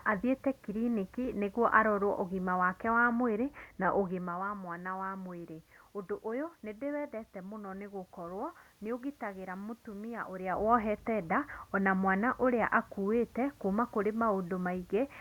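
Nothing here points to a technical problem; the background noise is simply the room the microphone was in, and the level changes around 4 s and again a little after 10 s are just the talker moving closer to or farther from the microphone.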